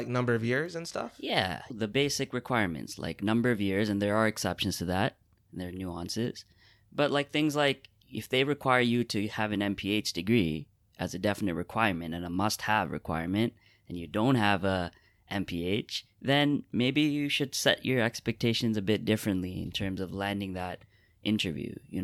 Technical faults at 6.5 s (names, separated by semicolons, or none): none